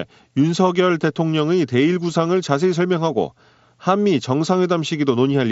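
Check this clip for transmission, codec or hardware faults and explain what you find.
One transmission fault is present, carried over a Bluetooth mSBC headset codec link with a light grain on loud sounds and an 8 kHz ceiling.

At 1.31 s there's a barely noticeable gap lasting about 7.5 ms, which fits one lost packet. This is concealed Bluetooth headset packet loss: the receiver patched the gap by repeating the best-matching slice of the waveform just before it, so the dropout is almost hidden.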